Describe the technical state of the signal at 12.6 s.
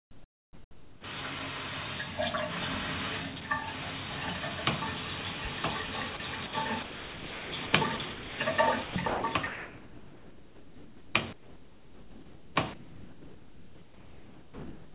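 At 12.6 s the audio sits inside a choppy stretch from 8.84 to 14.95 s, with about 5.4 s replaced by flat, hissy fill. The likely cause is sound chopped by the voice detector, which swapped real signal for comfort noise. The waveform shows abrupt gaps of steady low-level noise, and the spectrogram shows smooth, featureless bands capped at 4 kHz.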